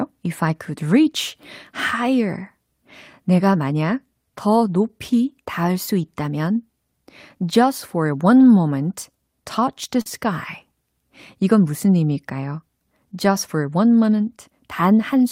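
A speech recording with one short concealed packet loss at about 10.01 to 10.07 s: roughly 40 ms of audio arrived too late and was synthesised from the preceding sound, giving a brief smear rather than the silent hole a plain dropout would leave.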